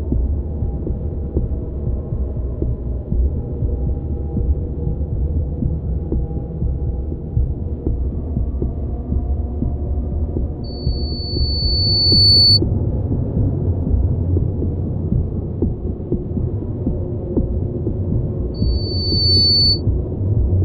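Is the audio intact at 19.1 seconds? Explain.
No. A loudspeaker feedback squeal runs from 18.54 to 19.82 s, so 19.1 s falls in the middle of it. A microphone is picking up the loudspeaker it feeds, and at 4.5 kHz the loop's gain exceeds one, so that frequency keeps reinforcing itself. The result is a piercing single tone that swells over roughly three-quarters of a second and then sits a few decibels above the surrounding sound until it stops.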